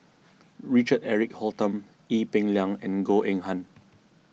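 The speech signal shows no technical faults at any point in the recording.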